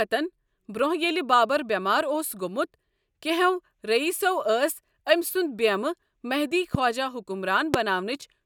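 Speech with two loud pops, at 6.75–6.77 s and 7.74–7.77 s, the second sharper at roughly 20 dB above the signal versus roughly 15 dB. Each is a single brief thump over continuing speech, likely from an electrical transient such as a switch or static.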